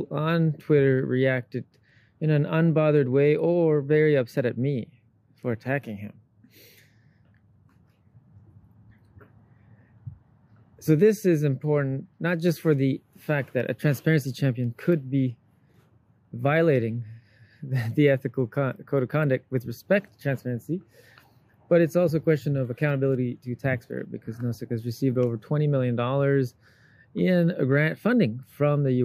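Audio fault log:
1.90 s and 23.15 s, dropped samples: at each point the stream likely lost a tiny run of samples, a fraction of a millisecond, so the waveform leaps to a later value. No sound goes missing, but each leap is heard as one sharp click.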